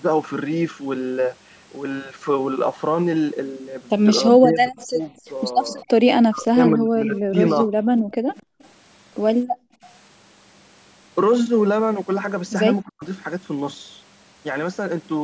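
From 4.21 to 5.1 s, the echo canceller most likely could not tell the near talker from loudspeaker echo while both sides spoke, so it turned the speech down along with the echo. This is speech suppressed in double talk: the voice dips by around 20 dB in pieces totalling about half a second. Inside that stretch, from 4.76 to 4.87 s, an echo leak appears. The far end's canceller likely left part of its loudspeaker pickup in the signal and sent it back, so a faint copy of the voice trails the original by 259 ms, about 25 dB down. The same leak returns from 5.67 to 5.83 s.

Double-talk suppression comes back from 6.28 to 7.69 s, likely from the same confusion. The cuts go deeper, around 30 dB, and add up to roughly 0.7 s of speech that sinks or breaks off.

From 8.08 to 8.61 s the canceller clamped the microphone while the loudspeaker played. This is background gated by the echo canceller: the room sound drops by about 40 dB for around 0.3 s, then returns. 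Over almost the same span, 8.1 to 8.69 s, an echo leak again brings back the 259 ms delayed copy, about 30 dB below the speech. The background gating happens again from 9.45 to 9.83 s, with a 40 dB dip lasting about 0.4 s.

A last, brief double-talk suppression at 12.83 to 13.04 s likely clips about 0.2 s of speech by as much as 40 dB. The audio throughout has the top limit of call microphone processing, with nothing above 8 kHz.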